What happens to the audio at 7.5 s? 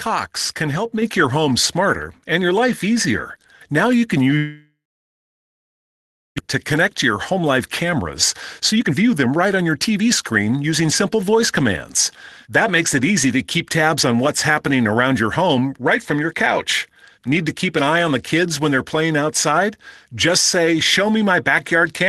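A jitter buffer speed-up runs from 7.32 to 8.06 s: the receiver trims short pitch-period chunks, about 50 ms in all, so the speech hurries roughly 6% faster at unchanged pitch.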